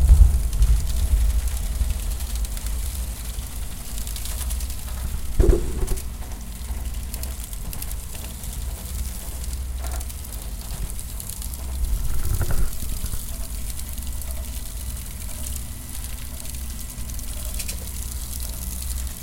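Throughout the clip, a channel delay (doubling) makes every event in these sounds repeat as a same-level slap echo about 93 ms later. One channel lagged by roughly a 4096-sample buffer before the mono sum. Waveform and spectrogram show each onset duplicated at that fixed spacing.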